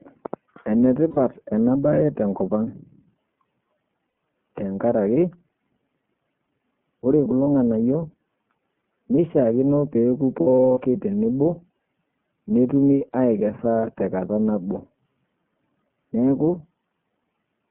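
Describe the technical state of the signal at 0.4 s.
At 0.4 s you're hearing the iLBC codec, and it runs through the whole clip, not just that moment. The speech is squeezed into a phone-line band of about 150 Hz to 3.4 kHz, so it's thin and muffled on top. Each 30 ms frame has its excitation coded on its own, which fits the 13.33 kbps mode. The damage is plainly audible as a slightly rough, synthetic edge on the voice.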